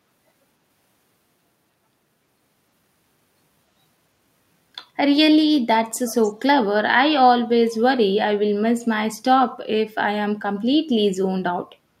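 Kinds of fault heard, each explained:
Echo leak: from 5.96 to 6.31 s a faint delayed copy of the speech trails the original by about 310 ms, sitting roughly 25 dB below it. The likely cause is sound from a loudspeaker at the other end reaching its microphone and slipping past an incomplete echo canceller. On a spectrogram the harmonic and formant patterns repeat, shifted right by about 0.31 s and much dimmer. The waveform shows a small ghost envelope following the main one.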